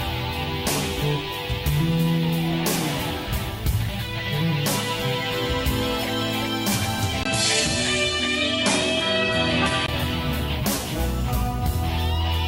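The input likely switched to a poorer device at 7.23 s in this recording of sounds, then back at 9.88 s. A brief 20 ms silence marks the switch, after which nothing above 11.4 kHz remains, a new noise floor sits about 30 dB down, and the level holds steady.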